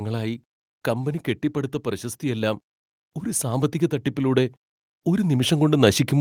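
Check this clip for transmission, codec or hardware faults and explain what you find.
The clip shows automatic gain rising, twice. From 0.84 to 2.69 s the level climbs by about 5 dB, and a second rise starts at 3.41 s and continues to the end. In both, the automatic gain control judged the input too quiet and raised its gain step by step rather than all at once. Because the gain sits ahead of everything, the speech and the background noise swell together over more than a second.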